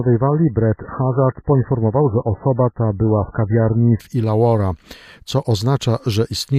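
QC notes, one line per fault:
0.0–4.0 s, adaptive stream starting at a low bitrate: the opening four seconds sound thin and smeary, with nothing above about 2.1 kHz and that watery, swirly codec texture on top, which fits a very low-rate MP3 rung somewhere around 10 kbit/s. At 4.0 s the treble snaps back in and the artefacts clear with no gap, as you'd expect when the player, having sized up the connection, steps up to a much higher rendition, likely around 128 kbit/s.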